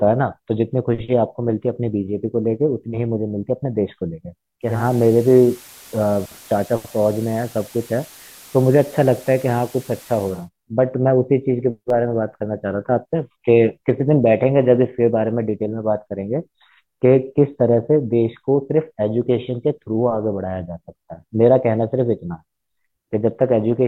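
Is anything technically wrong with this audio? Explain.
Yes. From 4.61 to 10.49 s the speech shows digital radio blending to analogue: the receiver lost its digital stream and cross-faded over about 0.27 s to the FM broadcast, then back. FM hiss sits well below the speech and the level stays steady. Smooth fades at each end, not abrupt gaps, set it apart from a plain dropout.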